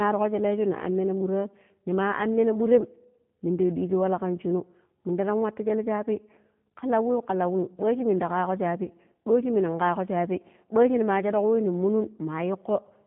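Throughout the speech, the G.729 codec damage is plainly audible. Everything above 4 kHz is missing, and the voice has a rough, slightly synthetic texture from being rebuilt out of a vocal tract filter, pitch predictor and sparse pulses, which fits an 8 kbit/s G.729A stream.

From 8.84 to 8.88 s comes VoIP packet loss concealed by the speech codec. Roughly 20 ms of audio was lost, consistent with one missing packet. The decoder extended its last pitch and filter at falling gain, producing a brief stretched sound that fades, and the voice stays weak or distorted for tens of milliseconds or more after packets return.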